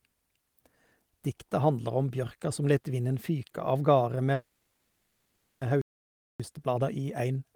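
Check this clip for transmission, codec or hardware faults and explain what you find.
Three related faults appear in the second half of the speech, all from delivery and playback rather than the codec or hardware.

From 4.33 to 5.63 s there is a call audio freeze: the last sound is held as a fading buzzy smear for about 1.28 s before the speech resumes where it stopped. Nothing is lost, but the audio now runs 1.28 s late. The likely cause is delayed packets leaving the jitter buffer empty, so the receiver stretched the final sound until data arrived.

From 5.82 to 6.40 s a playback stall cuts the output to silence for about 0.58 s mid-flow, and then the speech picks up again. The likely cause is the player being starved of data or its thread being blocked.

From 6.40 s to the end, time-compressed catch-up makes the speech sound hurried at about 1.15 times normal speed, with pitch unchanged. 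The player is shrinking its backlog by removing small slices and cross-fading across the joins.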